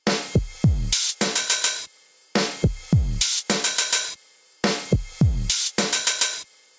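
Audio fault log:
Throughout: gain pumping. The level of these everyday sounds keeps moving. It is pulled down on each loud sound and climbs back between them, with a swing of around 15 dB. Loud and soft moments end up closer in level than they should, so the sound feels squashed. The likely cause is input gain set far too high, with a fast limiter or compressor clamping down on every loud sound. The call's band limit near 8 kHz is normal.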